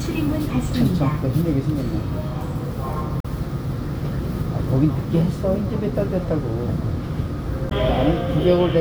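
A brief glitch cuts through the sound from 3.20 to 3.26 s, and a second glitch returns from 7.68 to 7.73 s, each about 50 ms long. Both are damaged data in a compressed stream: a short run of bytes in the encoded file was corrupted, so the decoder misread those frames, lost its place and had to hunt for the next valid frame header before normal playback could resume.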